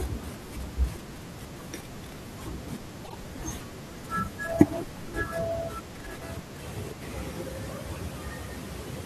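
At 3.04 to 3.15 s, frames out of order: two adjacent blocks of about 24 ms, one frame each, were swapped before decoding. That short stretch of speech plays with its halves exchanged, a brief garbled flutter, and no time is lost.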